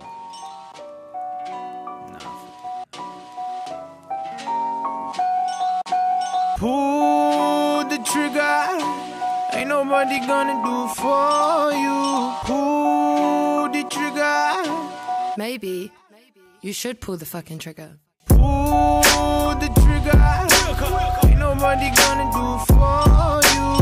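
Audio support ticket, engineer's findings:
No faults found on listening; nothing to escalate.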